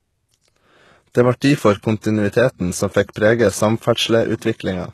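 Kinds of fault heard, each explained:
HE-AAC compression: gritty, synthetic-sounding treble with nothing above 12.3 kHz, likely rebuilt by band replication, so it sounds wrong rather than simply dull like a low-pass.
pre-echo: hiss that comes before attacks rather than after them, unlike reverb. It lasts 27 ms at 3.13 s, after "difor kontinuiteten som fekk", and 46 ms at 4.37 s.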